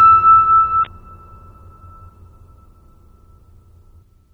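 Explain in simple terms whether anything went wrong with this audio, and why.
The music has a watery, swirly quality with dulled treble throughout, likely from heavy MP3 compression discarding detail it assumed you wouldn't miss. There's also damaged data in a compressed stream: short blips at 0.83–0.87 s, 2.05–2.10 s and 3.99–4.03 s, where the decoder stumbled over broken chunks.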